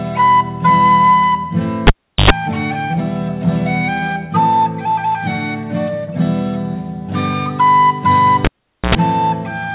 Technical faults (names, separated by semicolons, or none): cable pulled and plugged in